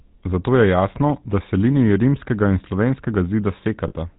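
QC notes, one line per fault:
Throughout: GSM full-rate codec. The speech has a buzzy, gravelly roughness across the whole clip. Nothing comes through above 4 kHz, so the sound is narrow and dull. The damage is plainly audible. The codec rebuilds the voice from a vocal-tract model driven by evenly spaced pulses, and it keeps only a thinned-out excitation. That regular pulse train is what gives the grainy buzz. The sound points to the 13 kbps full-rate GSM codec.
3.88 to 3.93 s: lost GSM frames. For about 40 ms the sound stops moving and holds as a brief rough, metallic ring. The decoder had no good data for this stretch. It repeated the settings of the last good frame instead of going silent. The gap is short, so it rings rather than fading to silence. Its length fits two 20 ms frames.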